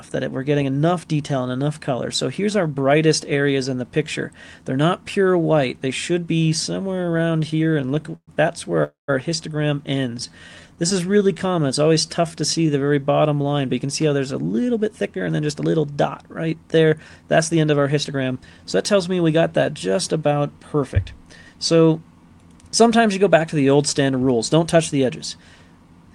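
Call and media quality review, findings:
Repeated stalls (stutter), 6.91–8.30 s: 23 short hangs, longest 120 ms, about 342 ms filled in total, roughly a quarter of that span. Jitter buffer kept running dry as packets came in late or slow; receiver stretched the last sound each time. Nothing lost, just drags.

Call audio freeze, 8.84–9.10 s: a 247 ms hold where the last sound gets carried on and then drops to silence for about 140 ms before picking up where it left off. Likely packets held up in transit, leaving the jitter buffer empty; adds about 247 ms of delay, nothing missing.

Jitter buffer slow-down, 10.15–12.86 s: audio plays at about 88% speed with pitch unchanged, sounds drawn out. Receiver repeating single pitch periods or bits of pauses to rebuild its reserve, adding about 344 ms in total over the stretch.

Jitter buffer speed-up, 14.43–18.65 s: audio rushes along at about 112% speed, same pitch, clearly hurried. 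Buffer holding more than its target, so the receiver trims short pitch-period chunks over and over, shaving off roughly half a second to pull the delay back down.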